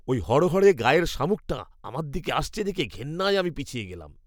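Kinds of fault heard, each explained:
Clock drift buffer slips: regular clicks in the speech roughly every 1.07 s, about four in all, likely from two clocks drifting roughly 150 ppm apart.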